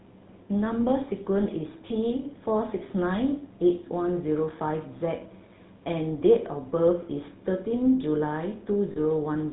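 Throughout, the speech passes through the GSM full-rate codec, whose pulse-driven vocal-tract model leaves a plainly audible buzzy, gravelly roughness and nothing above 4 kHz, which fits the 13 kbps full-rate coder. From 8.92 to 8.99 s, lost GSM frames leave the decoder repeating its last good settings, giving a brief rough, metallic ring; the gap points to about two 20 ms frames.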